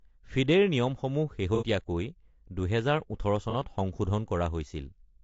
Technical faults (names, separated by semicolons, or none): low-delay AAC compression; AAC frame loss with concealment